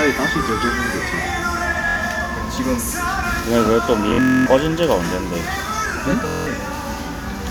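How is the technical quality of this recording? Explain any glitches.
The recording has three Bluetooth stutter dropouts, at 1.89 s, 4.09 to 4.46 s, and 6.28 to 6.47 s. Late or lost packets made the receiver replay its last short slice, giving a buzzy machine-gun repeat. The middle one is longest, with a 255 ms run, and the audio resumes further along each time.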